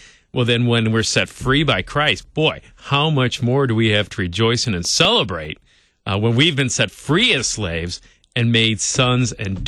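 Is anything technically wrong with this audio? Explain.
Yes. CD scratch ticks run from 4.65 to 5.65 s, just after "we have to rejoice" and before "uh when we've been". A blemish on the disc corrupts more data per rotation than error correction can repair, so the player patches it, leaving six brief ticks, the longest about 1.5 ms, at a regular rotational pace.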